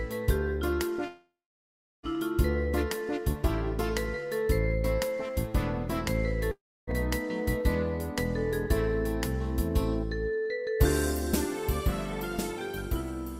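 From 1.07 to 2.06 s and 6.51 to 6.90 s, sound smears into a fading buzz, then blank gaps of 0.72 and 0.29 s on the waveform and spectrogram. This is likely a long network dropout.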